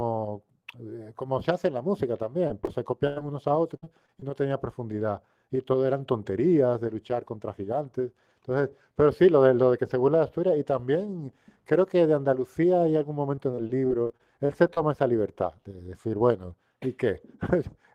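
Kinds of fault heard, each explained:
Short concealed packet loss: Brief smears or wobbles in the speech around 2.47–2.51 s, then twice back to back at 2.61–2.69 s, each lasting only a few hundredths of a second. About 20 ms of the call failed to arrive in time each time, and the receiver covered the hole by extending the preceding sound, using its pitch where voiced and shaped noise where not, before crossfading into the real signal.
Burst of packet loss: At 3.07–3.18 s the speech stalls into a held buzz or fading hiss for roughly a tenth of a second, then picks up further along with a piece gone. About 80 ms of consecutive audio was lost or arrived too late, and the receiver stretched the last sound across roughly 90 ms, lowering its level as the gap went on, before jumping ahead to the next audio that arrived.
Repeated packet loss (robotic sound): Choppy speech at 3.76–4.23 s and again at 13.35–14.79 s, with fragments dropping out. 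Losses recur in quick succession: four gaps totalling 120 ms in the first stretch, the longest 61 ms, concealing about 24% of it; twelve gaps totalling 260 ms in the second, none over 35 ms, about 18% concealed. Each patch repeats the last sound before the next hole arrives.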